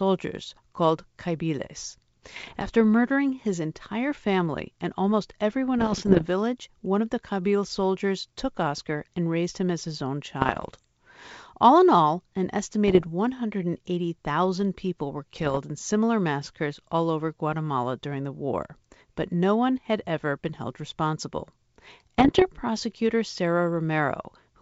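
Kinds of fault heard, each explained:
Bit errors on an ADPCM link: flipped bits knock the decoder's step size and predictor off, so each error rings on as pops and rough bursts with level jumps, in six patches; the waveform shows spikes and sudden amplitude steps, the spectrogram broadband vertical streaks.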